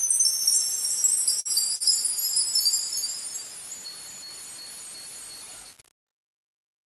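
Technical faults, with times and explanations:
Throughout: low bit depth without dither. The everyday sounds carry a coarse, grainy distortion that moves with the signal, sitting roughly 20 dB below it. Quiet moments turn gritty and sputter. This likely comes from truncation to about 6 bits with no dither to smooth the steps.
1.40–1.48 s and 1.75–1.83 s: short stall from a late packet. Each time, the audio holds its last sound for about 51 ms, giving a brief frozen buzz, and then carries on from where it stopped. The jitter buffer ran dry while waiting, so nothing is lost, only delayed. The top of the band stops near 12 kHz, as expected from the call codec.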